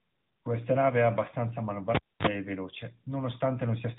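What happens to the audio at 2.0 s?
At 2.0 s the cable is pulled and plugged in. The event runs from 1.95 to 2.27 s. A pop marks the pull. The sound then drops to near silence for about 0.27 s. As the plug goes back in, only its tip touches at first. That contact lets in a short burst of 50 Hz mains buzz, lasting about 42 ms. A second pop follows as the signal returns.

The AMR narrowband mobile codec is also audible across this moment. It samples at 8 kHz and rebuilds speech from a vocal-tract model fed with a few pulses per frame. Nothing above 3.8 kHz survives, so the speech sounds boxed and telephone-like. The coding damage is plainly audible, with a synthetic, buzzy edge. That level of damage fits a mode around 10.2 kbps.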